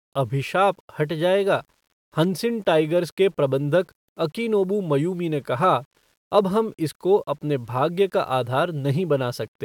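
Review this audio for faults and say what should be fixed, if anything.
Grainy distortion runs throughout the speech and follows its level, so quieter passages turn rough and sputtery, with error sitting roughly 40 dB below the signal. This is likely low bit depth without dither, rounded to a coarse scale consistent with 9-bit samples. To prevent it, keep at least 16-bit resolution and apply dither whenever reducing word length.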